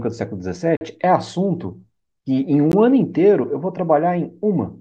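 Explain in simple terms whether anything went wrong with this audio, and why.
Two brief dropouts interrupt the speech, each a block of digital silence. From 0.77 to 0.81 s the sound cuts out completely for about 43 ms, heard as a short hole, which fits the playback program missing a 2048-sample buffer. At 2.72 s a shorter gap of about 15 ms comes across more as a tick. In both cases the audio switches abruptly to nothing and back, with no fade.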